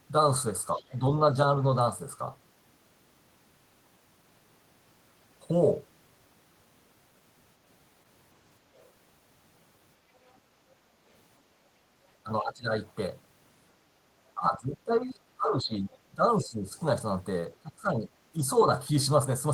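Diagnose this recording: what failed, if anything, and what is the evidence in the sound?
Call processing shows the other side's voice leaking through. Faint scraps of a second voice, roughly 30 to 40 dB below the main speech, appear at 0.73–0.98 s, 10.15–10.35 s, 12.88–12.92 s and 15.91–15.97 s. The echo canceller likely left residual loudspeaker sound in the microphone path.

Speech suppressed in double talk also points to call processing. The main voice dips by up to about 20 dB at 0.76–1.36 s, 12.23–12.82 s, 14.35–16.76 s and 17.62–18.7 s, while the far side is talking. The canceller likely failed to separate near speech from echo and attenuated both.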